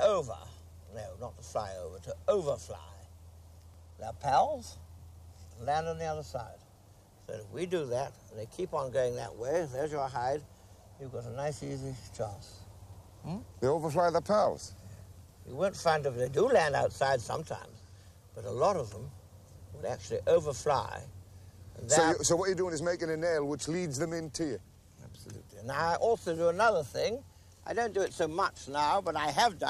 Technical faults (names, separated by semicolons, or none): none